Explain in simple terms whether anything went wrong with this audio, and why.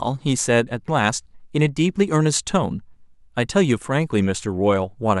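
Nothing went wrong with this speech recording, and no technical faults can be heard anywhere in it. There is no moment that needs explaining, so there is no time to point to.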